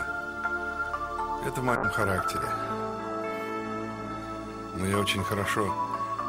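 At 1.77 s a call bitrate drop sets in. The estimated bandwidth fell, so the encoder went from 128 kbps to 21 kbps and coded far more coarsely. For about 2.5 s the sound turns rough and watery. It recovers at 4.33 s.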